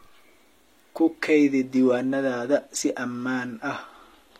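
A speech recording in which, from 1.19 s to the end, the adaptive stream drops to a lower bitrate: the treble abruptly turns synthetic and smeared, with nothing above 14.9 kHz, consistent with a switch from high-bitrate AAC to low-bitrate HE-AAC. Unlike a network stall, the change is sudden but leaves no gap.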